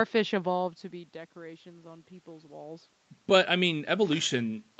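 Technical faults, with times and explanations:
No technical faults turn up here, just the ordinary sound of a call, with the room in the background and the talker's level drifting as they shift around near the microphone.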